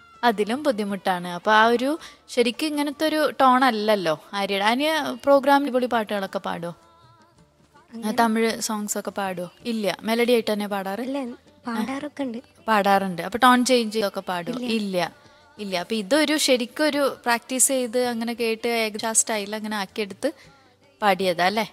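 Brief glitches at 5.66, 14.00 and 18.98 s mark small forward jumps of roughly 150, 100 and 150 ms. These are compressed frames skipped: around ten, ten and seven frames seem dropped or rejected, and the audio jumps ahead at each join.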